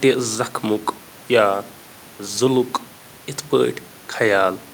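There are no technical faults in the speech, only the room's own background noise sitting about 27 dB below it.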